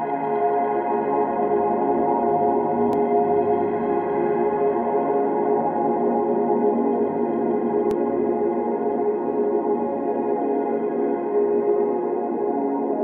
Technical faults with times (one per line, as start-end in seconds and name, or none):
2.93 audio missing between chunks
7.91 audio missing between chunks